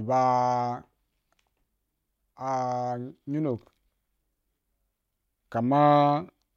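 The speech recording shows no technical faults at any point.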